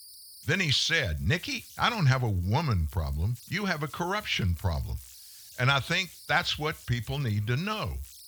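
From start to finish there are converter idle tones: a whistle around 5 kHz, about 24 dB below the speech. An undithered delta-sigma converter is locking into repeating bit patterns on small input, so it whistles in the pauses and turns grainy under quiet passages.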